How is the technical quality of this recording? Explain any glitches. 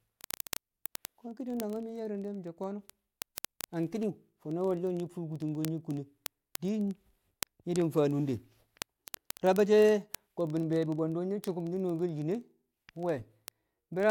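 The recording is marred by one continuous fault. Word clock ticks run from 0.11 s to 14.10 s: the receiving device's clock, roughly 700 ppm off the sender's, slips a sample about every 30 ms, producing hundreds of steady, rapid ticks under the speech.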